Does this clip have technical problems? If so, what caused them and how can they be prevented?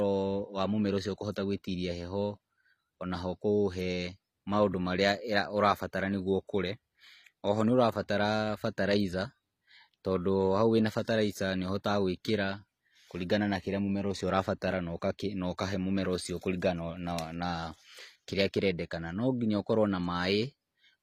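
Yes. Throughout the speech, nothing is present above 14.9 kHz, and the swirly, smeared artefacts of a starved codec stay in the audio. This is likely low-bitrate audio saved at a high bitrate: a roughly 24 kbit/s HE-AAC source re-encoded as high-bitrate MP3, which cannot restore what was discarded. To prevent it, encode once from the original uncompressed recording.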